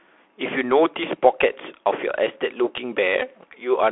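A speech clip carrying the Bluetooth CVSD headset codec from start to finish, with the damage plainly audible. Nothing passes above 3.8 kHz, and the sound sits in a line band of about 200 Hz to 3.4 kHz. A plain narrowband telephone path would give the same muffled band but stay clean. Here the one-bit delta coder, which fits a 64 kbit/s stream, makes sibilants scratchy, breaks up loud bright moments where the step size can't keep pace, and leaves a granular hiss under the speech.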